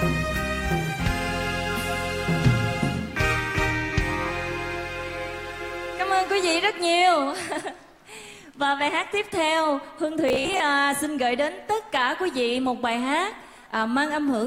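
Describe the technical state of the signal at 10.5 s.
At 10.5 s the signal is inside a stretch of robotic sound from repeated short buffers, running from 10.29 to 10.6 s. A 15 ms block is likely being replayed in place of missing audio, with about half the material repeated, imposing a rigid, metallic 66.7 Hz buzz.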